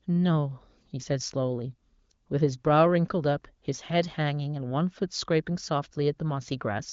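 No technical faults can be heard in the speech, whose content stops at about 7.2 kHz, as expected from an AMR wideband (HD Voice) codec, with the coding damage kept faint enough to fit a high rate such as 18.25 kbit/s.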